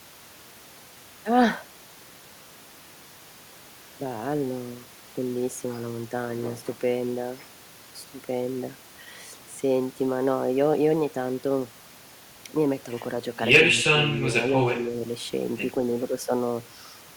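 At 13.7 to 13.83 s the speech dips by a few decibels, then at 14.72 to 14.96 s by around 10 dB. These are likely speech suppressed in double talk, as the echo canceller ducks the talker along with the far end. The waveform shows brief envelope notches, and the spectrogram shows faded energy.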